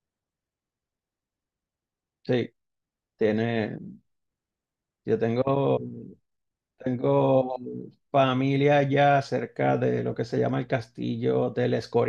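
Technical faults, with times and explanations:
No technical faults can be heard in this speech recording. There is nothing here to mark with a time or explain.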